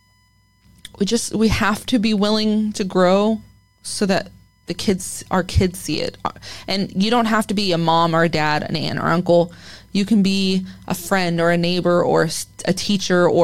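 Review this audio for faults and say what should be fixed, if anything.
A faint, steady whine of fixed pitch sits under the speech for the whole clip, roughly 45 dB below it, built on a 1 kHz fundamental with its strongest component at the 5 kHz harmonic. This is USB whine: the USB bus pulls current in 1 ms frames, and that 1 kHz pulsing leaks into the audio path through shared power or ground, producing a comb of harmonics rather than a single pure tone. Prevent it by powering the interface from a clean supply and breaking the ground loop, for example with an isolated USB hub or isolator.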